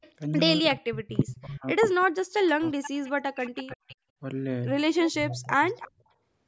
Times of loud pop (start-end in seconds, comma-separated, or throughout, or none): none